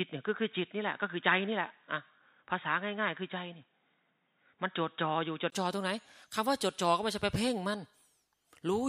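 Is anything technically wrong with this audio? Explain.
Yes. From 0 to 5.52 s the speech sounds dull and boxy, with nothing above 3.8 kHz, likely an input switched to a poorer device. A spectrogram shows a flat ceiling there, and a 20 ms waveform gap at the switch.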